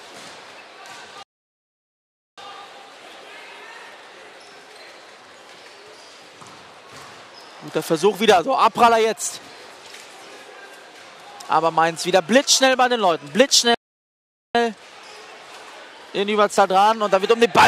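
At 1.23 s the sound halts mid-flow and stays silent until 2.38 s, a gap of about 1.15 s; a second playback stall runs from 13.74 to 14.55 s, about 0.80 s. Each time the audio simply stops and then resumes, likely because the player ran dry of buffered data or its thread was blocked. On a waveform both show as flat silent stretches; a spectrogram shows clean, fully dark vertical bands with abrupt edges.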